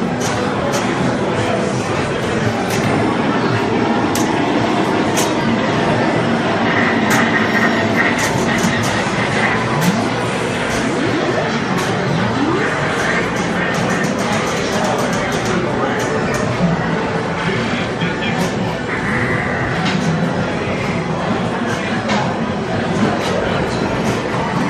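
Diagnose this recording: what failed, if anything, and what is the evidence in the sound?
Nothing in the chain from capture to playback has failed: the signal arrives intact at every stage, with no audible defect anywhere in the recording.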